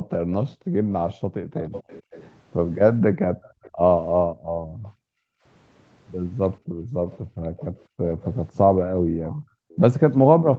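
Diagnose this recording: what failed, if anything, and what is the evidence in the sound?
The room background drops out sharply, by up to about 40 dB, from 0.0 to 1.55 s, 3.1 to 5.44 s, and 6.59 s to the end. This is background gated by the echo canceller, in call processing: while the far side played, the microphone was turned down hard.

A faint delayed copy of the speech trails behind, about 20 to 30 dB below it: 0.31 to 2.33 s at 425 ms delay, 3.43 to 3.7 s and 4.83 to 4.9 s at 496 ms, and 7.09 to 9.77 s at 549 ms. This echo leak likely comes from a loudspeaker echo the canceller failed to fully remove.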